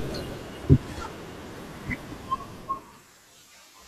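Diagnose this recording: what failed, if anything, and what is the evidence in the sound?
Nothing in this speech recording points to a failure at any stage, so there's nothing to diagnose here.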